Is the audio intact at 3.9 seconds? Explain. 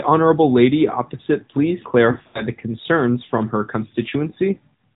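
No. At 3.9 seconds the speech carries the same AMR narrowband mobile codec damage present across the whole clip. The signal has been squeezed through an 8 kHz-sampled speech coder that rebuilds the voice from a vocal-tract model excited by a few pulses per 5 ms subframe, so nothing above 4 kHz survives. The result is muffled, telephone-band speech with a plainly audible buzzy, synthetic edge, consistent with a mid-rate mode around 10 kbps.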